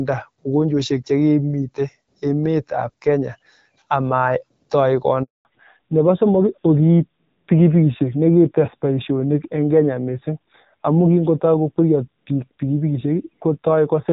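At 5.23 s a handover gap opens. The call switches networks and no speech frames arrive, so the speech decays within a few tens of milliseconds into 0.22 s of silence until 5.45 s. The waveform drops to a flat line, and the spectrogram shows a clean vertical blank band across all frequencies.

From 5.45 s to the end comes a fallback to narrowband. The link drops from HD Voice, whose light coding suggests a rate near 12.65 kbit/s, to a coarser narrowband codec, plausibly around 7.4 kbit/s. Everything above 4 kHz disappears, so the spectrogram's upper energy ends at a hard ceiling, and the speech sounds duller and rougher.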